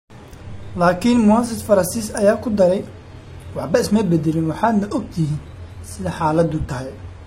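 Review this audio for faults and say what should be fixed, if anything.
At 2.86 s, right after "ayaa ku daray", the speech quality drops suddenly. There is no gap. The lower quality lasts to the end. Nothing remains above 14.9 kHz, and codec artefacts rise. This is an adaptive stream at a lower bitrate. The connection slowed, so the player switched to a cheaper version. The sound fits a move from mid-rate AAC to a low-rate HE-AAC rendition. A larger playback buffer or a steadier connection would keep the player on the higher-quality version.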